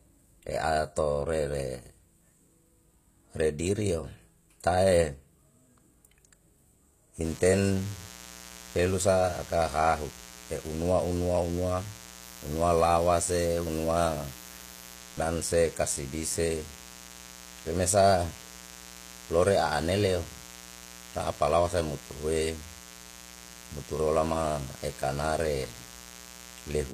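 Right from the start the speech has that gritty, slightly lispy top end, with s sounds going metallic and brittle. That's most likely HE-AAC compression at a low rate, consistent with something around 24 kbps. The codec only really encodes the lower spectrum and fakes the treble by copying lower bands upward under a rough envelope. So the highs sound bright but the harmonics don't line up, and there's nothing at all above about 14.9 kHz.

From 7.21 s through to the end, a mains buzz comes in. It's a steady, raspy drone built on 60 Hz, sitting around 20 dB below the speech. The rasp rather than a smooth hum points to sharp switching spikes, the kind a dimmer, rectifier or missing shield lets in twice per mains cycle. Those spikes throw harmonics of 60 Hz well up into the kilohertz range, so the buzz reads as edgy rather than just low.

Then between 12.23 s and 14.96 s there's a stretch of low bit depth with noise shaping. 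A thin, steady hiss appears that climbs hard toward the top of the band, and it's loud, only about 15 dB under the speech, which suggests the signal was squeezed down to roughly 8 bits. The rounding error from that has been pushed upward in frequency, which is why it comes across as a bright, airy hiss rather than a low rumble.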